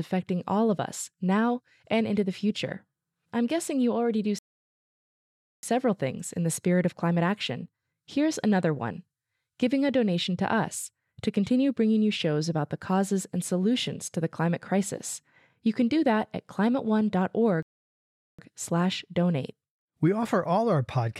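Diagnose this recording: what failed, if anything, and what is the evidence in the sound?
Playback stall at 4.39–5.63 s, after "guessing you already do", and at 17.63–18.39 s. The speech goes silent, then continues. The likely cause is a starved playback buffer.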